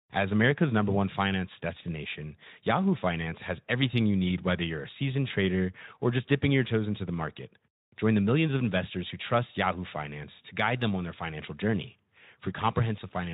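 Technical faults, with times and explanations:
No technical faults are audible in this speech clip. The Speex coding leaves only light marks on the voice, consistent with a bitrate of around 15 kbps.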